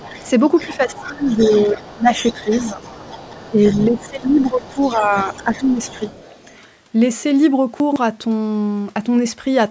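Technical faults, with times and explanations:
0.0–6.57 s, other side's voice leaking through: a faint second voice sits about 20 dB under the speech, likely loudspeaker echo the canceller failed to remove.
0.67–1.3 s, 1.73–2.09 s, 2.44–2.81 s, 3.5–5.13 s and 5.45–5.76 s, speech suppressed in double talk: the talker dips by roughly 5 to 20 dB while the leaked voice overlaps, the canceller likely attenuating both.
7.8–7.96 s, chunks out of order: a brief garbled jumble where a 40 ms chunk plays late, which fits it landing about three chunks behind.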